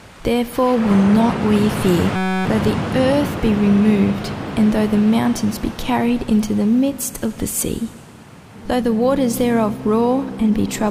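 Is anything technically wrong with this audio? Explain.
Yes. From 2.16 to 2.45 s the audio gives way to a steady buzz pitched at about 188 Hz, and about a third of a second of material is missing. This is a system hang loop: the system stalled while the sound hardware kept replaying the same short stretch of its ring buffer. That stretch is 5.33 ms long, which fits a 256-sample buffer, and it repeats 55 times, so the repetition rate itself is what you hear as a buzz.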